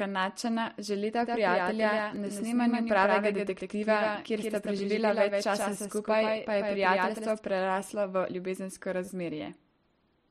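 From 1.23 s to 7.39 s the speech carries a doubled audio track, most likely because the same signal reached the mix twice, once directly and once through a slower path. The second copy trails by roughly 150 ms at about 5 dB below the original, full-band, with no decay or room colour. It sounds like a dry, crisp slapback behind every syllable, switching on and off abruptly at both ends.

Three times, fresh audio failed to reach the output in time and the device replayed its last 10 ms buffer, a repeated buffer. At 2.16 s and again at 5.62 s the buffer plays one extra time, and each repeat is heard as a brief click with a hard join. From 9.05 s to 9.08 s it repeats three extra times, stretching the glitch into a short buzz. No audio goes missing; the stream simply stalls on the same fragment.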